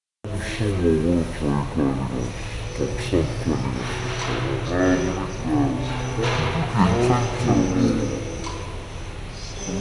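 From start to finish the whole thing runs at half speed and a full octave low, which is the classic wrong sample rate problem. It fits audio captured at 48 kHz being played back at 24 kHz with no conversion, so everything drags and sounds heavy and sluggish.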